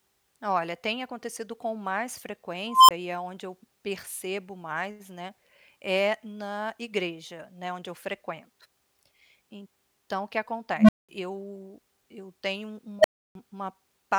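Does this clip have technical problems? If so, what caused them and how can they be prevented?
Yes, an unstable filter squeals in this speech three times: after "tem acontecido com mais" at 2.67 s (around 1 kHz), after "o que" at 10.76 s (around 200 Hz), and after "eu eu tenho" at 12.99 s (around 700 Hz). Each tone swells over 50 to 215 ms, clips, then drops out for 20 to 310 ms. Bad recursive-filter coefficients let the feedback run away. Prevent it by checking that coefficients keep the filter's poles inside the unit circle.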